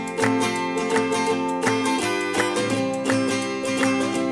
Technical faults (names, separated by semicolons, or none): none